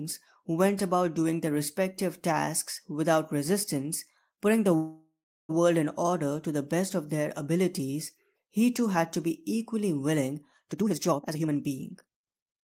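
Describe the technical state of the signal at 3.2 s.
The speech signal is intact at 3.2 s, with no audible fault at that moment.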